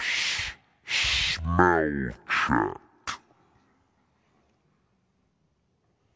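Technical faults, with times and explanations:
Throughout, wrong sample rate: the speech plays at half speed and a full octave low, which points to 32 kHz audio played back at 16 kHz without conversion.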